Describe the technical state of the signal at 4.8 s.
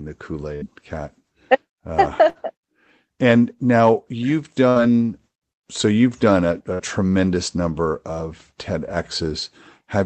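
At 4.8 s you're just coming out of a burst of packet loss that runs from about 4.69 to 4.79 s, right after "and now you've". Packets dropped or arrived too late, so the receiver filled about 64 ms by stretching the last sound and fading it down, which gives a held buzz or a fading hiss depending on what came before. About 60 ms of the original audio never comes back, so playback resumes slightly further on. The call codec behind it, which sounds like Opus at roughly 20 kbps, has its top end stopping around 8 kHz.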